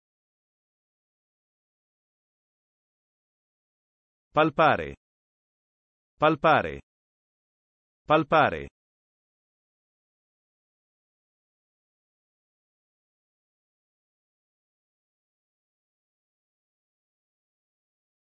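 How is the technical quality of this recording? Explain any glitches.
No glitches or faults heard.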